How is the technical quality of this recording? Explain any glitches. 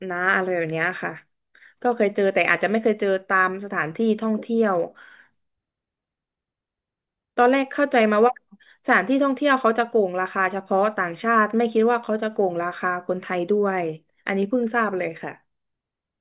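Nothing stood out as a technical problem on listening to the recording, so there are no glitches to explain.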